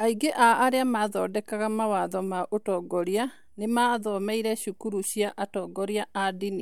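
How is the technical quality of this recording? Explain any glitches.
There's one real problem: clock slip clicks running from about 0.12 s right to the end at 6.62 s. A tiny tick arrives roughly every 40 ms, around 150 in all, blurring into a soft rattle under the speech. Each is likely a single sample dropped or repeated between two unsynced clocks drifting apart by around 500 ppm.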